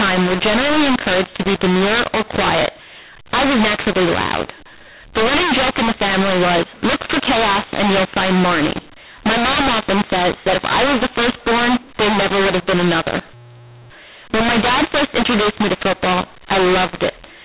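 From start to finish, the speech suffers a mu-law and A-law mix-up. It was coded with A-law but decoded as mu-law. Sample levels come out scrambled, so the audio sounds harsh and distorted. Quiet passages fill with noise. Everything stays band-limited below 4 kHz, as telephone coding at 8,000 samples a second allows.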